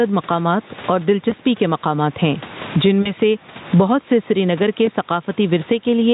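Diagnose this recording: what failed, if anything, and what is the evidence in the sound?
Gain pumping sits at the input and level-control stage. The level ducks by around 20 dB under each loud syllable. The likely cause is microphone gain set far too high, with a fast limiter clamping each peak. On a waveform, the envelope looks flattened, and the noise floor rises and falls with the speech.

VoIP packet loss concealed by the speech codec appears at the network and codec stage, at 1.29–1.34 s just before "کے مقامات ہیں جن", at 3.02–3.13 s between "کے مقامات ہیں جن" and "سے بہت", and at 4.85–4.89 s. The decoder extrapolates from the last pitch and filter with falling gain, which fits one or two missing 20 ms frames. A spectrogram shows smeared, repeating harmonics that dim.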